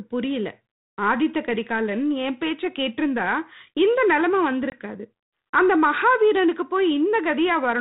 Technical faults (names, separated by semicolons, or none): packet loss on an ADPCM call